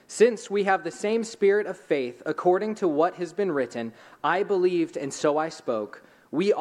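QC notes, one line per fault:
No faults heard.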